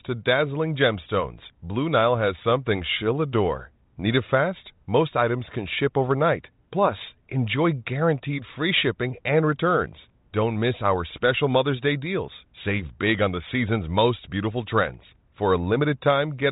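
Nothing stood out on listening to this speech, which comes through a G.726 ADPCM path at 40 kbit/s with its content stopping at about 3.8 kHz.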